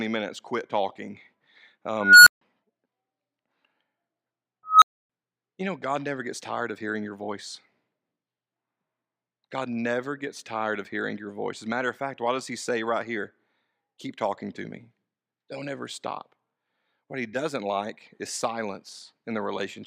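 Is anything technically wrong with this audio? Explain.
Yes. At 2.01 to 2.41 s and 4.65 to 5.10 s, just before "you know", a squeal around 1.5 kHz swells to clipping over 0.26 s and 0.17 s, then drops to silence for 0.15 s and 0.28 s. This is an unstable filter: a recursive filter with bad coefficients whose output grew without limit until its numbers overflowed and it reset.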